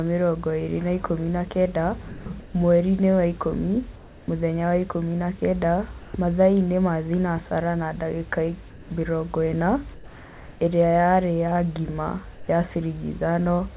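At 2.08 s, right after "na ikũmi na kenda", the speech breaks off and 0.18 s of flat hiss takes its place before "mwerinĩ wa ikũmi mũthenya". This is sound dropped by the voice detector: the sender likely judged the sound to be background and stopped sending, so about 0.13 s of speech is lost. On a spectrogram the harmonic striations end abruptly and a uniform grey band, capped at the call path's 4 kHz ceiling, fills the gap.

From 2.40 to 2.54 s, the room noise becomes comfort noise in place of the background. It is smooth and featureless, and about 4 dB quieter. The waveform shows an even, slightly thinner noise floor where the real background had texture. The cause is likely discontinuous transmission, with the receiver synthesising the noise during the pause.

The same substitution occurs from 3.96 to 4.28 s, between "mwerinĩ wa ikũmi" and "mũthenya wa ikũmi na", where the level drops by about 1 dB.

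At 6.00 s, after "wa ikũmi na kenda", 0.14 s of synthetic hiss replaces about 0.07 s of speech before "mathaainĩ ma thinacara na". It is a dropout of the same kind as the first.

Comfort noise returns three more times. From 8.70 to 8.90 s it is about 1 dB louder than the real background. From 9.94 to 10.60 s, the longest patch, it is about 1 dB quieter. From 12.34 to 12.48 s it is about 3 dB quieter. Each appears as a blank, evenly shaded stretch with no fine spectral detail.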